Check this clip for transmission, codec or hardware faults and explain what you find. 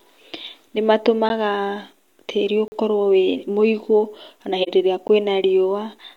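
Four dropouts break up the speech, of two kinds.

Block of digital silence, at 1.29 s, 2.68 to 2.72 s and 5.08 s: sharp ticks at 1.29 and 5.08 s, and a 40 ms hole at 2.68 s. Samples were replaced by zeros, most likely because the output buffer went unfilled in time, so the sound drops to silence and returns with no fade.

AAC frame loss with muting, at 4.62 to 4.69 s: a brief dip of about 43 ms. The decoder zeroed the missing spectrum, and its overlapping windows fade the sound out and back in, which fits the loss of a single frame.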